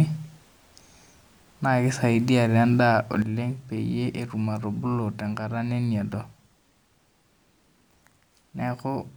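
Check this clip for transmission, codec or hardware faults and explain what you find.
There's one fault: a sudden gain jump at 3.22 s. From there to the end, the speech and the background noise both drop by about 8 dB at once. That points to a gain change likely applied between two samples with no ramp to smooth it.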